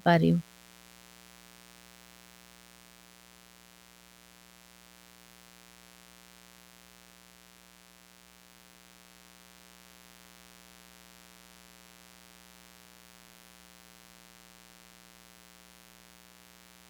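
Right from the start and all the way through, there's a mains buzz sitting under the speech, built on 60 Hz. It's the spiky kind rather than a smooth hum: something like a dimmer, a rectifier or an unshielded run is letting sharp switching pulses in twice per mains cycle, so the harmonics climb well up into the kilohertz range. You hear it as a steady, raspy buzz, sitting maybe 15 dB under the speech.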